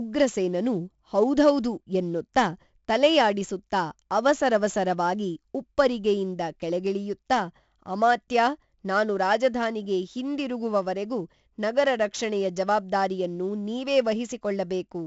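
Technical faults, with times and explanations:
Throughout, 4-bit ADPCM compression: each sample of the speech is coded as a coarse 4-bit step from a predicted value, and the step size adapts only gradually, so a gritty hiss rides on every loud syllable and fades in quiet gaps. The damage is heavy, with roughness on sharp onsets where the step lags. Nothing is present above 7.7 kHz, which dulls the sound and fits a 64 kbps stream at a low sample rate.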